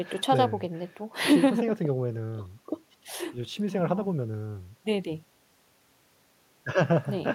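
Nothing stood out as a technical fault on listening to this speech recording.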